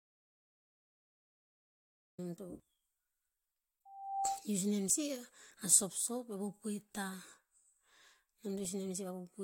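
Speech, carrying three faults. An audio dropout to silence is already under way when the clip begins and lasts until 2.18 s: silence with no room tone, likely because the input was lost while silence kept being written. A loudspeaker feedback squeal runs from 3.85 to 4.45 s, a single 786 Hz tone swelling over roughly 0.4 s to about 5 dB above the speech as the mic-to-speaker loop exceeds unity gain. An overlap between stream segments at 4.94 s removes about 5 ms, causing a tiny skip where the waveform jumps, consistent with a boundary between 4 s segments.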